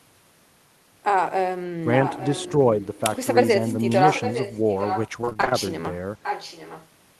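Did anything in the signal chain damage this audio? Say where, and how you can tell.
Yes. Echo leak, call processing: the speech returns 0.86 s late, roughly 10 dB down, at 1.93–2.51, 3.89–5.1 and 6.23–6.88 s, likely loudspeaker pickup the echo canceller missed.

Repeated packet loss (robotic sound), network stage: 5.21–5.53 s turns choppy and robotic. Eight short holes are patched by extending the preceding sound, concealing half the span.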